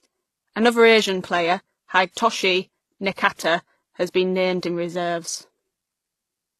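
Speech with layered codec artefacts throughout and nothing above about 12.3 kHz, likely from transcoding between lossy codecs: a very low-bitrate HE-AAC-style encode re-encoded at a higher WMA-like rate.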